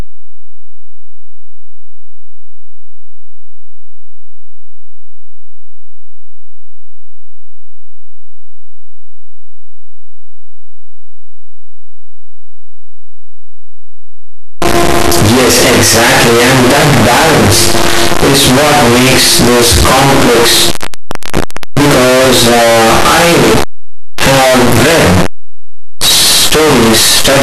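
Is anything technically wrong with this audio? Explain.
Yes. Throughout, the speech is buried in loud, harsh distortion with quiet passages as loud as the rest, likely signed and unsigned mixed up, flipping the top bit of each 8-bit sample.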